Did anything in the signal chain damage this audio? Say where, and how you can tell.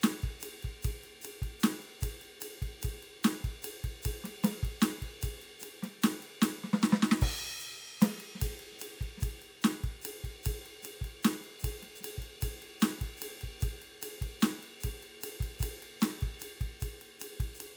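No, nothing along the chain seems to have damaged this music, and there's no stage where a problem shows itself in what you hear.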